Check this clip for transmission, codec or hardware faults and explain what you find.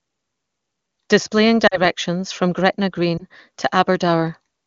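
Two transmission faults: lost AMR speech frames at 1.67 to 1.82 s and at 3.17 to 3.24 s. The wideband speech around them is clean, which fits the top AMR-WB rate.

Lost AMR speech frames: Radio errors corrupted frames, so the decoder filled the gaps by repeating its last good pitch and vocal tract settings at falling gain. About 40 ms is lost in the first event and 20 ms in the second. Each is heard as a brief smeared dip before the speech recovers.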